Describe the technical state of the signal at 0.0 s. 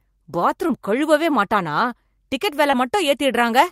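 At 0.0 s the speech signal is intact, with no audible fault at that moment.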